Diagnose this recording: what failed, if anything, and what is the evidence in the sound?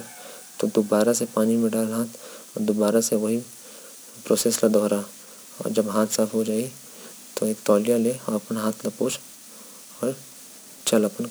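Crude rate conversion at the sample-format stage from 4.26 s to the end. Gritty, inharmonic fizz trails the speech about 20 dB down, consistent with nearest-sample 48-to-44.1 kHz resampling. Spectrograms show non-harmonic lines.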